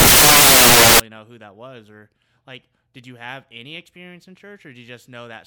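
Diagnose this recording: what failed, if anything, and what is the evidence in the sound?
The sample-format conversion stage failed: samples built from the wrong bytes from 0.0 to 1.0 s. The speech becomes loud, harsh broadband noise, because wrongly assembled bytes push the rapidly changing low bits into each sample's large part. Analogue hiss would sit far lower and stay level.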